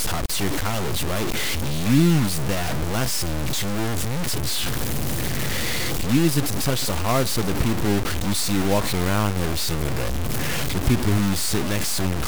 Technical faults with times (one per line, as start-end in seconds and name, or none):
0.00-12.27 low bit depth without dither